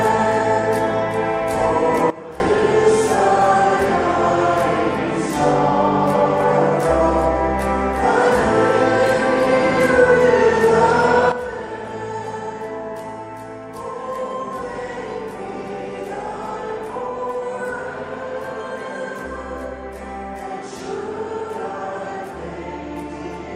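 At 2.10 s the level drops abruptly by about 18 dB, recovering at 2.40 s; at 11.32 s it drops by about 12 dB and stays down to the end. Sound and background noise fall together, with no fade. This is a sudden gain jump, likely an unramped digital gain change. The waveform envelope shows vertical steps, and the spectrogram dims uniformly across all frequencies at those instants.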